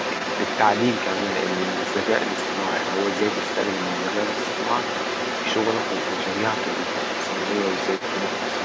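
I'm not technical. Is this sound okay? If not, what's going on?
No. A second voice sits under the speech from start to finish, nearly as loud as the main talker. That's likely the other side's voice leaking through from the loudspeaker.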